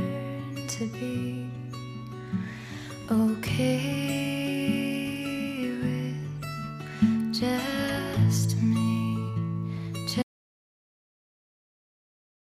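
At 10.23 s an audio dropout to silence, likely from lost input, runs to the end: no room tone, a flat waveform, a blank spectrogram.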